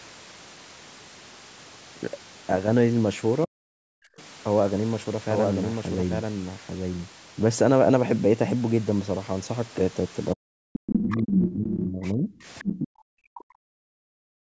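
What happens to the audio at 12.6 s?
At 12.6 s two faults overlap. The speech there sits inside a stretch of speech suppressed in double talk, running from 10.35 to 14.14 s. Across roughly three seconds of that span, the talker's level falls away in pieces, at its deepest by about 40 dB. The likely cause is an echo canceller that heard both ends talking at once, could not tell the near talker from the loudspeaker echo, and turned everything down. Unlike a network dropout, the gaps follow the other side's activity rather than falling at random.

From 12.59 to 12.78 s the other side's voice is leaking through: a second voice, only about 5 dB below the talker, comes through the microphone. It is likely loudspeaker sound that the echo canceller failed to remove. A room echo would trail the talker's own sound, but this is a different voice arriving on its own timing, brief and loud.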